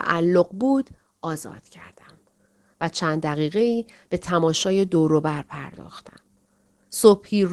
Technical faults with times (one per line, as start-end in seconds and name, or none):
0.00-7.53 clock drift between sender and receiver
0.15-7.47 repeated timing corrections